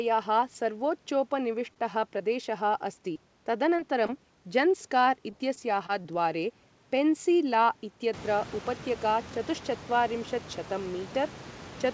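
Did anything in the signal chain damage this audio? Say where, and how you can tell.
Yes, all of it at the network and jitter-buffer stage of the call path.

A short stall from a late packet occurs at 1.74 to 1.78 s. One sound is held roughly 21 ms too long with a faint buzzy sustain, and then the audio resumes exactly where it left off. Nothing is lost. The jitter buffer ran dry while waiting for a late packet and stretched the last output. Playout delay grew by about 21 ms.

Short concealed packet loss appears at 2.18, 3.13, 3.77 and 4.06 s. Each event is a brief smear or wobble lasting a few hundredths of a second, and about 20 ms of real audio is gone each time. The decoder extended the preceding sound for 11 to 21 ms, continuing its pitch or shaping noise, and then cross-faded back into the received audio. This covers the hole but does not restore what was in it.

Repeated packet loss (robotic sound) runs from 5.30 to 6.06 s. 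The sound turns choppy through four separate gaps, the longest about 21 ms, with about 80 ms missing in total. About a tenth of that span is synthetic fill. The losses arrive too close together for the concealment to recover between them, so the patches follow one another closely. The band stops at 8 kHz, which fits a wideband call codec such as G.722.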